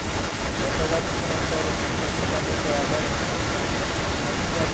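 From 0 to 4.74 s, a second copy of the speech trails the original by about 210 ms, at roughly the same loudness. This is an echo leak, likely from a far-end loudspeaker whose echo canceller failed to remove the returning signal.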